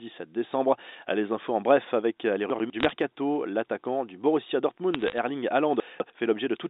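Right after "bref avec euh les", at 2.5 s, there's a short jumbled patch running to 2.7 s: chunks out of order. A 100 ms block landed one slot late, so it plays after the block that should have followed it. Nothing's missing, the sound is just shuffled, and you get a little garbled hiccup at the three hard joins where the pieces butt together.

Just after that, from 2.80 to 2.89 s, a brief burst of crackle sits on top of the speech. That's bit errors on a digital phone line: flipped bits in the A-law stream, each one knocking a single sample off. It's a light rate, roughly a few errors per thousand bits, and the ones that land on the sign or a high-order bit come through as sharp ticks. It comes back for longer from 4.94 to 5.18 s, with more of those ticks scattered across it.

Then from 5.8 to 6.1 s there's a second out-of-order stretch, and this one's worse. A 100 ms chunk turned up two slots late, so the jumble covers more ground. 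Under all of this the G.711 telephone coding itself is plain to hear in the narrow phone band, roughly 200 Hz to 3.7 kHz.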